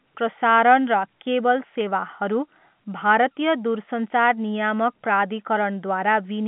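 Nothing stood out on listening to this speech.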